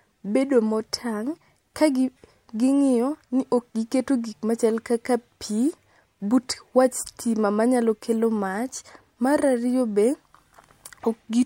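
A speech recording with no technical faults to report.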